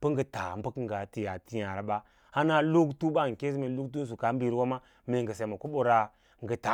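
No technical faults can be heard anywhere in the speech recording. There is no moment in the audio that calls for a time or a description of a problem.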